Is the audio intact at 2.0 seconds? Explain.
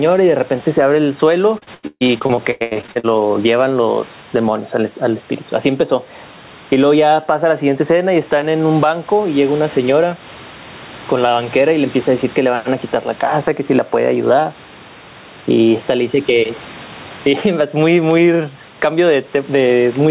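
No. At 2.0 seconds the sound sits inside a burst of repeated packet loss (robotic sound) running from 1.58 to 3.06 s. It turns choppy, breaking up in more than a dozen short holes, the longest about 138 ms. Packets arrived late or not at all, again and again, and each hole was patched by stretching the last bit of sound forward. Almost half of that stretch is synthetic fill rather than real audio.

Gain pumping also affects this moment, with a swing of about 10 dB, so the sound feels squashed. The likely cause is gain set far too high at the microphone, with a fast limiter or compressor clamping it down every time the level jumps, then releasing it again in the quiet gaps.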